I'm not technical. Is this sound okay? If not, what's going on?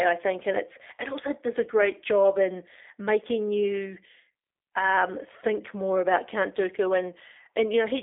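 No. A G.729 codec runs through the whole clip, start to finish. This phone-call system rebuilds the speech from a simplified model of the mouth and throat, so it sounds rough and a bit synthetic, and nothing above about 3.7 kHz gets through, making it thin and muffled.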